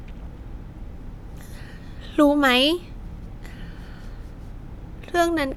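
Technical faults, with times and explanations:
No technical faults can be heard anywhere in this speech recording, and the signal holds steady throughout.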